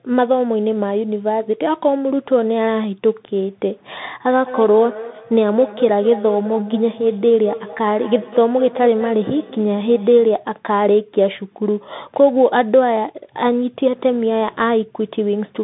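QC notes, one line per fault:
throughout: Bluetooth CVSD headset codec. The link ran through the narrowband headset codec, which encodes one bit per sample as a step up or down with an adapting step size, consistent with a 64 kbps CVSD path. The band runs from about 150 Hz to 3.7 kHz and nothing above 3.8 kHz survives, so the speech sounds muffled and phone-like. The damage is plainly audible: sibilants turn scratchy, loud bright sounds distort as they outrun the step, and a granular hiss sits underneath.
4.28 to 10.42 s: feedback echo between two devices. A second device on the same call in the same room replayed what this microphone sent, and this microphone picked that playback up again. The echo canceller only removes its own device's output, so the sound returns at a fixed interval of roughly a fifth of a second. The repeats peak at about 14 dB below the speech, and each pass comes back thinner and more ringing.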